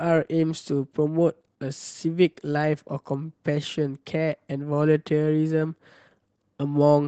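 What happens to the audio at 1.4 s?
At 1.4 s the speech carries Opus voice compression, which runs through the whole clip. The hybrid coder, linear prediction below 8 kHz with a transform layer above, quantises the excitation coarsely, fitting roughly 16 kbps, giving a plainly audible hoarse, slightly robotic texture.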